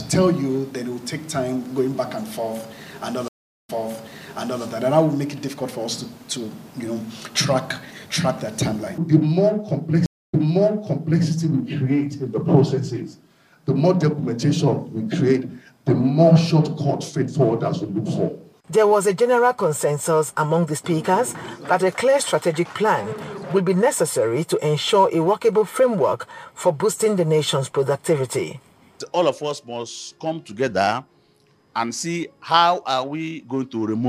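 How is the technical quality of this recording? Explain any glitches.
Two stream reconnects break the recording. At 3.28 s the audio drops out for 405 ms and resumes with a fade-in, repeating about 0.94 s of material. At 10.06 s a 270 ms gap is followed by a replay of about 0.91 s. Each time the connection failed, the player reconnected, and a fresh decoder took the server's resent burst.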